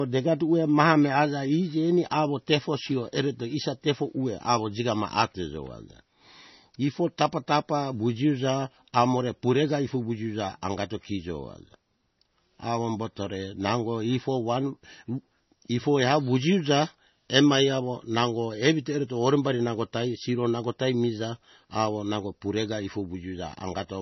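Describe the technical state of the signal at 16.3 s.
At 16.3 s the speech carries MP3 compression damage, present across the whole clip rather than at that instant alone. Nothing survives above 6 kHz, and the remaining band sounds watery and swirly, with metallic chirping on s sounds as weak frequency lines flicker between frames. Heavy damage of this kind is likely from a starved encoder, which fits a bitrate around 24 kbps. A plain low-pass filter would dull the top without that warbling.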